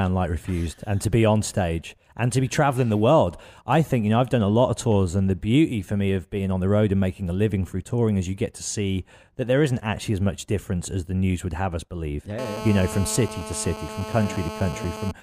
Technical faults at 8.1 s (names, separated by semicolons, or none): none